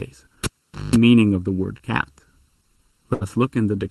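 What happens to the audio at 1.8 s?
At 1.77 to 1.81 s there is a short concealed packet loss. About 20 ms of the stream never arrived, and the decoder filled the hole by carrying the preceding sound forward, repeating its pitch where voiced or substituting shaped noise, before crossfading back into real audio. It comes across as a brief smear or wobble. On a waveform, copied cycles sit in place of natural variation; on a spectrogram, a short patch looks frozen or blurred.

Running through this moment, as through the whole clip, is channel delay causing comb filtering. One channel lags the other by under a millisecond, so summing to mono cancels content at regularly spaced frequencies, the first around 700 Hz, then roughly every 1.4 kHz above it. The result is a hollow, phasey tone. A spectrogram shows fixed, evenly spaced dark horizontal bands that never move, whatever the sound does.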